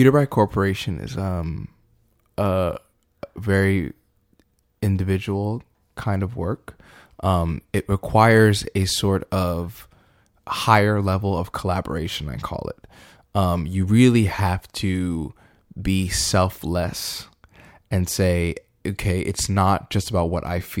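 A speech recording, and nothing technically wrong turns up anywhere in it, so there's no fault to time or explain.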